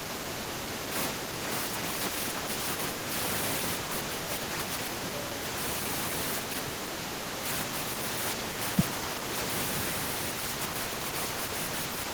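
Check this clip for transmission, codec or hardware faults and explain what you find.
Two short dips in the speech, from 0.45 to 0.64 s (deepest about 35 dB down) and 7.34 to 7.40 s (about 20 dB), look like speech suppressed in double talk: the echo canceller, likely confused by simultaneous far-end audio, ducked this talker too, leaving brief drops in level.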